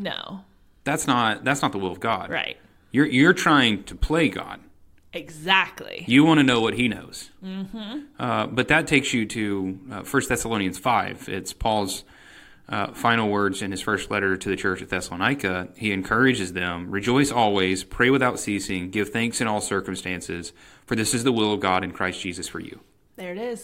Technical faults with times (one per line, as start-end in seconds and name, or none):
none